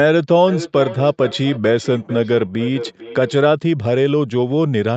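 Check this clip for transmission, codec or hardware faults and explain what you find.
A feedback echo between two devices runs from 0.48 s to 3.41 s; the audio is cut off above 8 kHz, which fits a wideband call codec setting.

Feedback echo between two devices, 0.48–3.41 s: each stretch of speech returns roughly every 0.4 s, at most about 12 dB below the direct sound, each pass thinner and more ringing. A second device in the room replays the call and the first microphone picks it up again. The echo canceller only removes its own device's playback. On a spectrogram, faded copies of each syllable repeat at even spacing. The waveform shows trailing decays after each burst.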